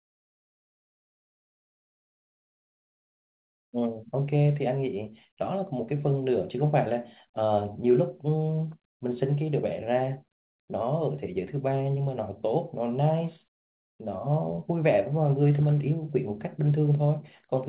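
No technical faults are audible.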